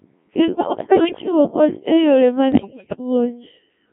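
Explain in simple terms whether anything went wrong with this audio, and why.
Two things went wrong here. The whole clip went through a Codec 2 vocoder, a very low-rate digital radio codec. It doesn't keep the actual waveform. It sends only a rough summary of pitch, loudness, voiced-or-not and tone shape, then rebuilds the speech from sine waves. That's why the voice sounds heavily robotic and buzzy throughout, and why it's squeezed into a narrow, phone-like band.

On top of that there are bit errors on digital voice radio, the kind you hear at the edge of coverage. The first burst runs from about 0.41 to 1.32 s, ending just before "kony e yore ma". The second runs from about 2.52 to 2.97 s, right after "kony e yore ma", and it's the harsher of the two. Because every bit steers the pitch, level or tone of a whole chunk of sound, flipped bits make the voice lurch in pitch and loudness and dissolve into warbles and robotic gibberish.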